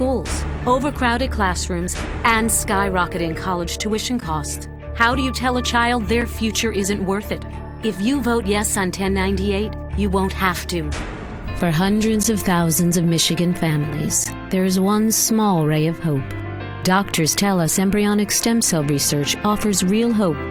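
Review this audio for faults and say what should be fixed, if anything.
There's a gap between stream segments at four points: 4.21, 6.21, 12.23 and 14.24 s. Each is a short hard-edged hole of silence, about 11, 5, 12 and 15 ms long. They sit on 2-second segment boundaries, where the timestamps of neighbouring segments don't quite meet and the player pads the difference with silence. Nothing is lost, but each hole interrupts the sound. To fix it, keep segment timestamps contiguous at packaging so each segment starts exactly where the last one ends.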